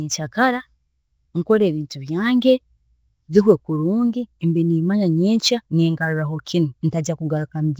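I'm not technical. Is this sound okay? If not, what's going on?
No. Throughout, the speech sounds rough, hissy and underwater, with nothing above 7.7 kHz, which points to Nellymoser compression, likely from an old Flash-era recording. There is also sample clock jitter: an unsteady recording clock adds a roughness that grows on louder, brighter sounds and disappears in pauses.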